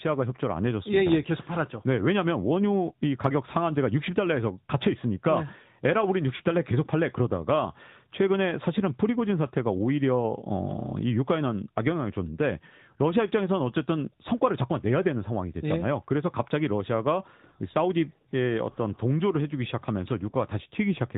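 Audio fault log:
throughout AMR narrowband mobile codec. Nothing above 4 kHz survives, and the sound is plainly buzzy and synthetic. This fits roughly 10.2 kbps mobile coding.
6.36 to 6.42 s, 20.30 s lost AMR speech frames. Corrupted frames were replaced from the last good settings. The first gap, 40 ms, dips or warbles. The second, 20 ms, briefly dips or warbles.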